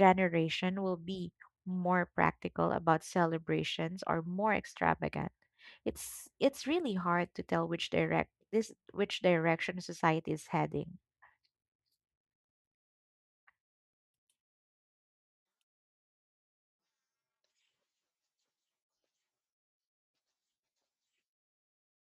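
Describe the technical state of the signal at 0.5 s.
At 0.5 s the speech signal is intact, with no audible fault.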